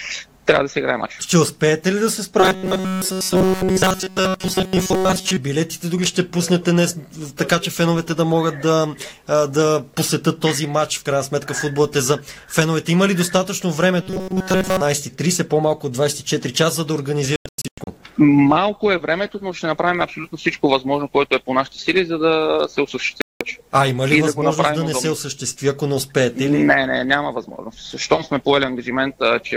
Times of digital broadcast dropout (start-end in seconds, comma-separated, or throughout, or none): 17.36-17.87, 23.21-23.41